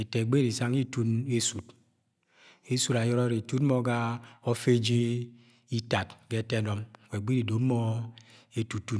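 No technical faults are audible anywhere in the speech recording.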